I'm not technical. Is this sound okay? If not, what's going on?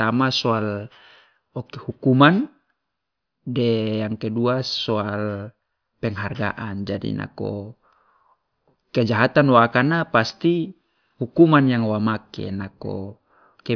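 Yes, nothing wrong can be heard anywhere in this speech recording.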